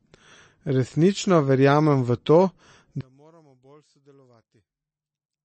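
From the start, the speech carries the marks of MP3 compression. Nothing is present above 8.3 kHz, consistent with the encoder's fixed treble cut-off, and the damage is plainly audible: a watery, swirling texture as weak frequency components drop in and out between frames, with metallic chirps on sibilants and softened consonant attacks. This points to a starved bitrate, which fits roughly 32 kbps, as the likely cause.

At 3.01 s the level falls by about 36 dB and stays down to the end. The likely cause is one channel inverted: with one side's polarity reversed, everything common to both channels cancels when they are summed to mono. The centred speech all but disappears, leaving only a faint residue formed from the small differences between the two channels.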